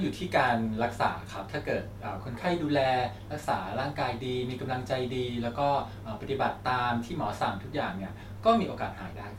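Nothing in this recording stands out as a technical fault, so there's no moment worth flagging as it runs.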